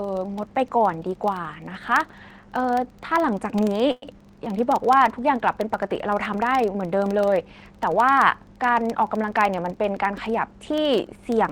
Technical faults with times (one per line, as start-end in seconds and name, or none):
0.00-11.52 filter restarted on every block
3.91-4.05 call audio freeze
9.61-10.82 jitter buffer speed-up